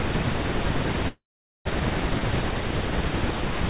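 From 1.08 to 1.67 s the speech stops, a brief fading buzz giving way to about 450 ms of silence before resuming intact: a call audio freeze, likely from delayed packets emptying the jitter buffer, over the narrowband audio cut off above 4 kHz.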